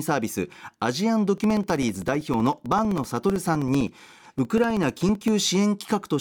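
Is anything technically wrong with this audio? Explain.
Yes. From 1.38 to 5.28 s the speech ticks every 64 ms. These are periodic USB or driver dropouts, each silencing about 2 ms while the bus stalls.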